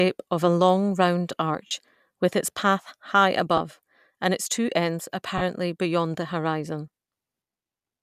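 A speech recording with three short dropouts from lost LE Audio frames, where the decoder filled the gap by repeating the last spectrum with scrambled phase. Each dropout sounds like a brief grainy smear. The first runs 1.67 to 1.71 s, about 40 ms, between "of a long round" and "with its path high". A 10 ms one follows at 3.57 to 3.59 s, after "with its path high". The last spans 5.38 to 5.42 s, roughly 30 ms, between "and its two ends" and "beyond the horizon". The slight breathy edge points to light LC3 coding at a likely 64 kbps.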